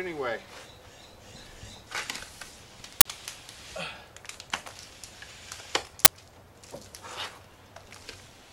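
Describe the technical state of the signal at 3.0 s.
A short, loud burst of harsh digital noise cuts in from 3.01 to 3.05 s, lasting about 46 ms. This is an uninitialised buffer: a block was played before any audio was written to it, so leftover memory came out as samples. The burst length fits a 2048-sample block.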